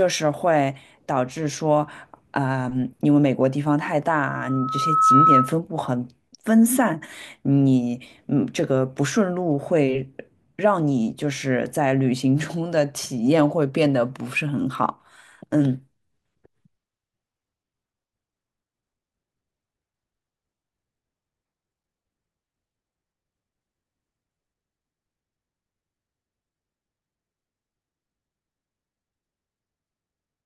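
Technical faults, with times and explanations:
4.27–5.56 s, loudspeaker feedback squeal: a steady 1.3 kHz tone swells over roughly 0.7 s until it sits about 10 dB above the speech. A microphone is hearing its own loudspeaker, and at that one frequency the loop gain exceeds unity, so the tone keeps feeding itself until it ends at 5.56 s.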